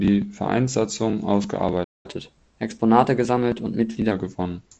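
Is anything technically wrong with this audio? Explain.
Yes, there are two related faults in this speech, heard through a G.722-style wideband band-limit with nothing above about 7 kHz and a slightly grainy lower band, which fits the 48 kbit/s mode.

Playback stall, 1.84 to 2.06 s. The speech cuts off mid-flow and the output goes completely silent for about 205 ms before sound resumes. A gap of that length in the middle of continuous speech most likely means the player ran short of buffered audio, or its output thread was held up, and it had nothing to send to the device until data arrived again.

Catch-up at higher speed, 2.06 to 4.12 s. Right after the gap, the player works off its backlog by resampling the audio to play 1.1 times faster for roughly two seconds. Because this is resampling rather than time-stretching, pitch rises together with tempo, by about one and a half semitones. 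The speech sounds hurried and slightly higher than before until both drop back to normal at 4.12 s.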